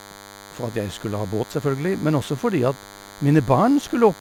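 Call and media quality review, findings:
DECT cordless phone buzz across the whole speech clip: thin, steady 100 Hz buzz with dense harmonics, roughly 20 dB under the speech. Nearby DECT handset or base bursting every 10 ms, rectified in the audio circuit. Thin pulsed buzz rather than mains hum's smooth sinusoidal tone.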